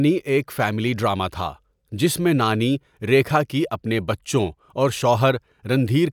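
Listening to this speech recording, nothing stood out as a technical problem anywhere in it.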